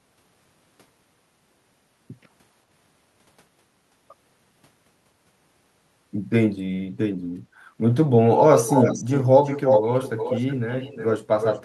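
From 8.55 to 9.24 s, 9.44 to 11.12 s and 11.41 to 11.6 s, an echo leak returns the speech 361 ms late. It is fairly loud, then quieter at the end. A loudspeaker echo canceller likely missed it.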